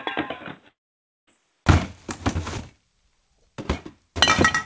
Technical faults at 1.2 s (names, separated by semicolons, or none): input switched to a poorer device; long network dropout